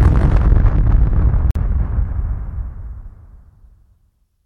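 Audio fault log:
1.51–1.55 s, Bluetooth stall: the sound drops abruptly to dead silence for about 48 ms, then resumes, leaving a brief hole in the sound rather than a fade. A gap this short and this clean is likely a wireless dropout, where radio interference delayed the incoming audio long enough for the headphones' small playback buffer to empty, so output halted until the retransmitted data arrived and filled it again.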